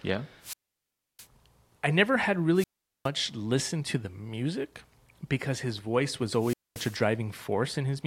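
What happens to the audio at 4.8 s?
At 4.8 s the speech carries on intact, with no dropout, click, distortion or other fault at that point.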